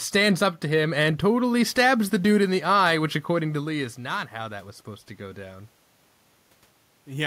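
From 3.36 s to 5.76 s, just after "in the eye which", the voice and the room noise behind it swell together over more than two seconds. That is automatic gain rising. Around 3.0 s the talker moved away and the level at the microphone fell by about 11 dB. The automatic gain control then slowly raised its gain by about 4 dB, lifting the background along with the voice.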